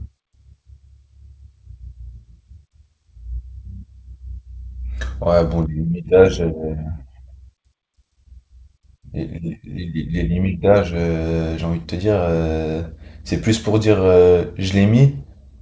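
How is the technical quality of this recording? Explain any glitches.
No glitches or faults are audible.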